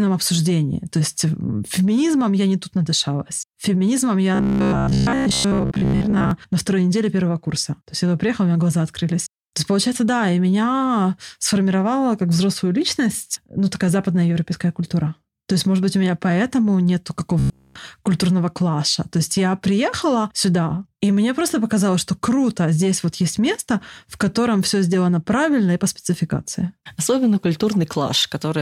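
From 4.35 to 6.31 s, the speech turns into robotic sound from repeated short buffers, just before "на второй неделе первого". A rigid, metallic buzz at 66.7 Hz covers most of that stretch. That pitch fits a 15 ms slice being looped. New audio likely arrived too slowly, so the last slice was replayed while real audio was skipped. The same buzz returns from 17.39 to 17.75 s, between "у меня поэтому нету" and "культурного клаша". This time it fills the whole gap.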